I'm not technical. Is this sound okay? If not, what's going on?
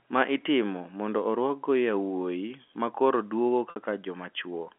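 No. At 3.70 to 3.76 s there is packet loss with pitch repetition: about 60 ms went missing, and the receiver filled the gap by repeating the last bit of voice, giving a brief buzzy hold.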